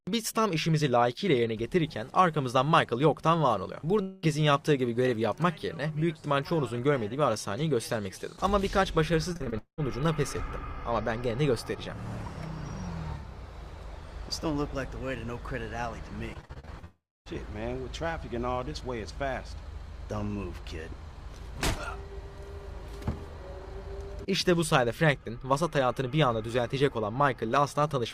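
At 4.01 s the sound breaks off for about 0.23 s, to 4.25 s. The gap is filled entirely by a continuation of the preceding sound, a fading buzz with no drop to silence. When the audio returns, roughly 0.22 s of material is simply absent. This is likely a long network dropout, with the receiver's concealment stretching the last sound across the hole.

From 9.33 s to 9.80 s the audio turns choppy, the signature of repeated packet loss (robotic sound). Several holes follow one another closely, the longest about 0.2 s, and each is patched by repeating the last sound. Around 60 percent of this stretch is concealed rather than real audio.

A second burst of packet loss runs from 16.34 s to 16.85 s. It has more but shorter holes, none longer than about 40 ms, so it sounds like rapid stuttering. About 38 percent of the span is concealed.

It runs straight into what is likely a longer dropout from 16.85 s to 17.28 s. 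A brief fading continuation gives way to about 0.26 s of silence, and roughly 0.42 s of audio never arrives.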